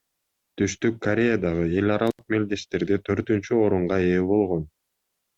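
Speech with an intermittent contact fault from 2.07 to 2.23 s: a loose connection opens for about 81 ms, showing as a flat waveform gap bracketed by broadband crackle spikes.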